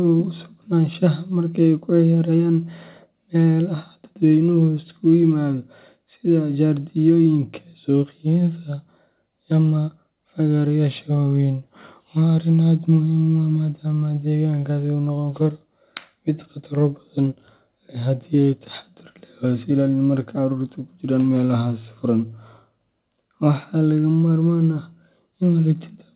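No faults heard in this speech; the narrowband call path leaves nothing above about 4 kHz, as expected for telephone-grade coding, and the microphone processing shows nothing amiss.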